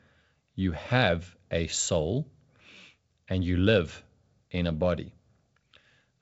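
No technical faults can be heard in this speech recording. The band stops at about 7.7 kHz, as with G.722 wideband telephone coding, and with at most a faint trace of coding noise it sounds like the full 64 kbit/s mode.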